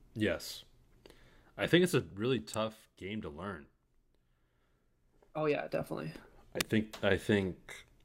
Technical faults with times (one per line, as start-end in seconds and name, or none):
2.54 electrical switching spike
6.61 electrical switching spike